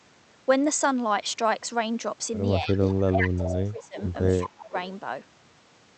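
A speech recording with two recurring faults in its second half. The first is speech suppressed in double talk. The voice dips at 2.6 to 2.78 s, then at 3.05 to 3.97 s, then at 4.32 to 4.74 s. The drops deepen from about 10 dB to roughly 20 and 25 dB. The likely cause is an echo canceller that could not tell its own talker from loudspeaker echo while both sides spoke, so it turned everything down. The second fault is echo leak. A delayed copy of the voice, 190 ms behind, appears at 2.83 to 3.01 s, 3.39 to 3.62 s, 4.01 to 4.06 s and 4.43 to 4.47 s. It sits about 10 dB below the speech at first, then fades to 20 to 25 dB below. This is likely a loudspeaker's sound reaching a microphone and getting past the echo canceller, then being sent back.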